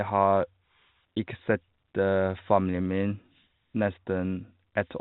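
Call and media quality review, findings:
Nothing to report; no faults heard in this speech.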